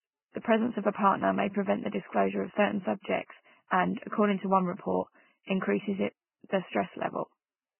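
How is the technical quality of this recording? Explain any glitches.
The technical quality is poor, with heavy codec damage across the whole recording. The likely cause is Vorbis compression at a very low setting, consistent with a bitrate near 10 kbps. The encoder draws a smooth spectral floor and spends too few bits on the residue, so it drops everything above 3 kHz and quantises the remaining upper band crudely. The speech sounds dull yet hissy and grainy, with rough tones and smeared consonant onsets.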